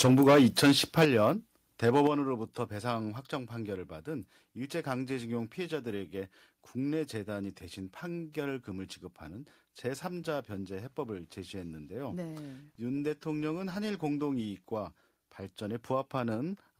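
From the start to 1.3 s the speech shows microphone overload: peaks run about 11 dB past full scale, flattening roughly a tenth of the waveform, which gives loud syllables a harsh, crackly edge. The likely cause is input gain set too high, so the converter clips. Within this stretch the microphone volume steps down at 0.06 s by about 2 dB and at 1.05 s by about 8 dB. Each step is an abrupt drop in both voice and background level, most likely the call software reacting to the overload. Overload returns from 1.84 to 2.07 s, about 5 dB over with a lighter crackle. It is followed at 2.07 s by a further cut of about 7 dB, then smaller steps at 3.09 s of about 2 dB and at 16.35 s of about 1 dB.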